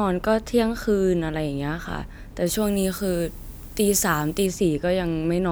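From 2.46 to 4.46 s the speech has pre-emphasis left on. The treble was boosted and never cut back. At 10 kHz it sits about 14 dB above 1 kHz, which fits a 75 µs FM curve. The sound turns thin, bright and hissy.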